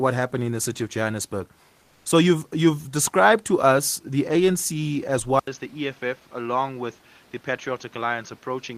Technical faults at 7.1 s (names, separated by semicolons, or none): input switched to a poorer device